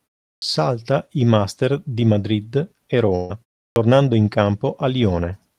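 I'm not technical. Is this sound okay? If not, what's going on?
No. At 0.38 s and again at 3.72 s, there is a clipped start after a pause: the playback device dozes off during the short silence before each point and wakes about 40 ms late, so the speech begins abruptly with its first sound cut off.

From 3.15 s to 3.36 s there is a burst of packet loss. About 140 ms of audio never arrived in time, so the player stretched out the last sound it had, fading it as a held buzz or hiss, then jumped ahead, skipping what was missing.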